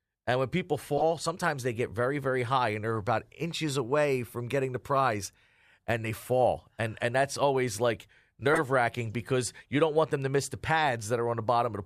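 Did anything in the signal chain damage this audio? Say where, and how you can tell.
Yes, at the codec: corrupt frames were decoded, with flipped bits feeding wrong gains and codes to the decoder, which misplaced energy in frequency. Brief blips sound at 0.97–1.02 s after "when people", faintly at 2.95–2.98 s, and loudly at 8.53–8.60 s, each spanning a few frames.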